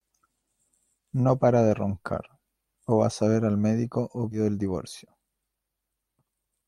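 At 4.31 to 4.39 s, between "ver al médico o" and "el divorcio", compressed frames are skipped. Roughly 70 ms of speech vanishes, fitting about three 20 ms frames, so the audio jumps ahead.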